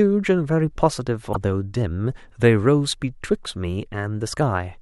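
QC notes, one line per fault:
1.29–1.36 s, damaged data in a compressed stream: a brief glitch of about 70 ms as the decoder misreads corrupted frames, loses sync, then relocates the next header.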